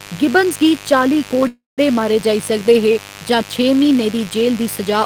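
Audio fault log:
throughout mains buzz: a steady, raspy buzz sits under the speech at roughly 20 dB below it, built on 50 Hz. Sharp switching spikes, 100 per second, from a dimmer, rectifier or unshielded cable spread harmonics up to several kHz, giving the rasp.
1.47–1.81 s call audio freeze: the last sound stretches into a fading buzz that drops to about 170 ms of silence, then speech resumes where it stopped, roughly 0.3 s late. Delayed packets likely drained the jitter buffer. Nothing was lost, but a gap was inserted.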